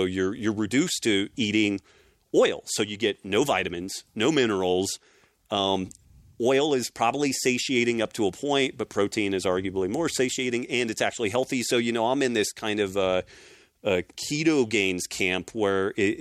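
No technical faults are audible.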